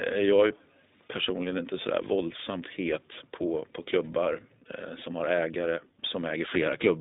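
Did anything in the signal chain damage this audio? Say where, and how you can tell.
Yes. The iLBC codec is at work for the whole clip, at the codec stage. The speech sits in a narrow telephone band, roughly 200 Hz to 3.7 kHz, with nothing above it. The voice has a plainly audible rough, synthetic edge because each 20 ms frame's excitation is coded on its own, without help from the frame before. This character fits the 15.2 kbps mode.

Lost iLBC frames occur at 4.24 to 4.27 s, at the network stage. A packet went missing, and the decoder filled the hole by repeating the last pitch cycle blended with noise. This produces a brief held, slightly buzzy vowel-like sound. The gap points to a single lost 20 ms frame. Because iLBC frames stand alone, the voice snaps back to normal right after the gap.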